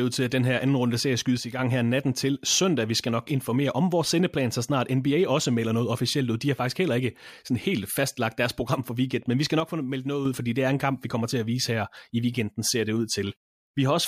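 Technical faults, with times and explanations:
1.38–1.59 s and 9.60–10.25 s, one channel drops out: the speech abruptly falls about 6 dB with no fade, likely one stereo side going silent in the mono sum.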